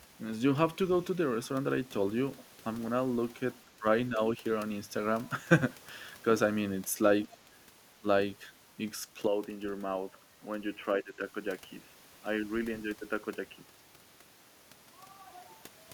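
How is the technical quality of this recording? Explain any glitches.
The recording has two kinds of glitches: brief dips in the speech and a stretch where the sound turns narrow and dull.

Speech suppressed in double talk occurs at 3.64 to 3.84 s, 7.45 to 7.5 s, 7.99 to 8.05 s and 11.02 to 11.14 s. The speech briefly drops, by about 10 to 20 dB. This is likely an echo canceller mistaking overlapping talk for echo and turning both down.

Input switched to a poorer device is heard from 9.27 to 13.79 s. The speech loses its high end and becomes dull and boxy. It gets a few decibels quieter, with a faint new noise floor. There is no gap at the switch. A likely cause is a change to a lower-quality microphone or headset profile.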